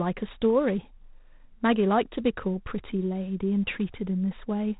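Throughout, G.726 ADPCM coding leaves a harsh, rasping hiss that tracks the speech level, consistent with 24 kbit/s, and nothing passes above 3.8 kHz.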